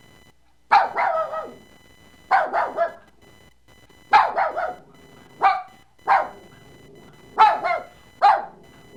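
From the start to the end of the clip, a faint buzzing with a chirping edge sits under the sound. This is computer activity noise: changing load on the processor, graphics hardware or mouse pulls current through the ground shared with the audio circuit, and those fluctuations ride onto the signal. The pulses repeat at around a kilohertz and sit well below the programme, roughly 35 dB down, varying with the machine's activity rather than with the audio.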